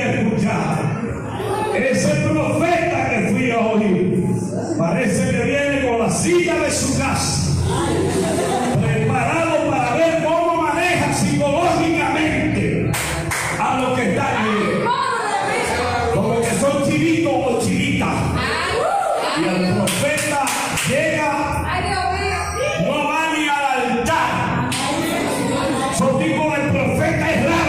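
No technical faults can be heard anywhere in the clip. Nothing in the audio breaks, drops out or changes character from one moment to the next.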